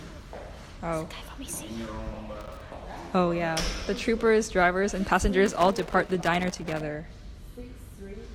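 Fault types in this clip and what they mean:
Loose connector crackle: a worn or grimy contact somewhere in the cable run keeps losing and regaining its connection as it shifts, so the speech gets chopped up and any stray DC on the line turns into pops. Here it shows up twice as a rough, uneven scratchy burst, first a short one from about 2.41 to 2.61 s, then a longer stretch from 5.46 to 6.81 s.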